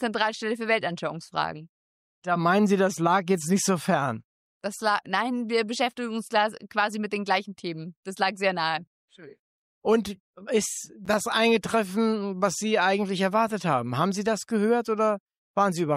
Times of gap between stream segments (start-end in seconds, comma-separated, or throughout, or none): 11.05